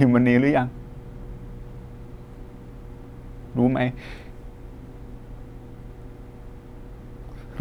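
Speech, with mains hum under it from start to finish. A steady low tone sits at 60 Hz, roughly 20 dB below the speech. It never changes. The power line is leaking into the signal, likely through a ground loop or a nearby transformer.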